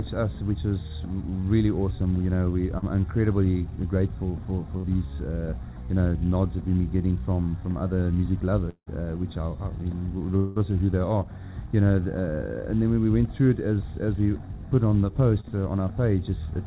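Throughout, the sound has a hollow, slightly phasey colour with a fixed notch around 3 kHz, inside a band that stops at 4 kHz, which fits a narrowband G.711 call path. That notch is channel delay comb filtering: one channel runs roughly a fifth of a millisecond late, and summing the two to mono cancels shared content at evenly spaced frequencies.

At 2.78 to 2.84 s and again at 15.40 to 15.45 s there is a brief smear where the sound seems to hang and wobble. This is short concealed packet loss. About 40 ms never reached the decoder, so the receiver extended the last sound for 40 ms and 30 ms respectively, then blended back into the real audio.

From 4.78 to 4.85 s the sound turns into a short held, fading tail before it picks up again slightly further on. That is a burst of packet loss. About 60 ms went missing, and the receiver continued the previous sound for about 55 ms while turning it down.

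At 8.69 to 8.88 s the sound stretches into a fading buzz or hiss for about 170 ms, then drops to silence for about 70 ms before resuming. From 10.36 to 10.59 s a similar fading fill lasts about 190 ms, with no silent stretch and around 9 ms of extra length. Both are likely long network dropouts. About 180 ms and 200 ms of audio were lost, and concealment covered the gaps until real audio returned further on.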